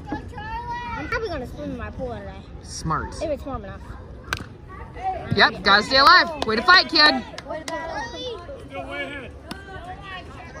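Two dropped buffers (overruns) are heard, at 1.12 s and 6.07 s: at each the audio jumps forward with no gap of silence. The first skips roughly 30 ms of material, the second roughly 10 ms. The likely cause is the capture software falling behind, so the hardware overwrote samples it had not yet read and the surviving audio on either side was spliced directly together.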